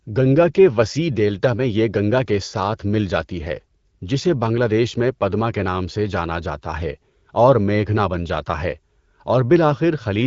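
Nothing stood out on listening to this speech recording, which carries the mild band-limited character of AMR wideband (HD Voice) coding at 12.65 kbit/s.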